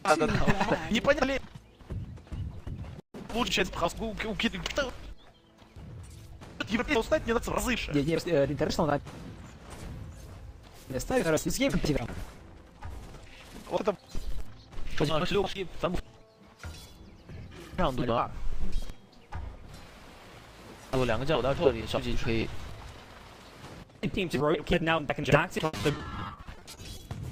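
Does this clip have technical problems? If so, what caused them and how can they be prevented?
Yes. From 25.65 s to 27.01 s the sound turns choppy and robotic: this is repeated packet loss. In that stretch 16 gaps, the longest 80 ms, were patched by stretching the preceding sound, so 380 ms in total, about 28% of the span, is filler. Unlike a single dropout, the holes recur rapidly, giving a metallic stutter rather than one clean break. A stable, less congested network with a larger jitter buffer would prevent it.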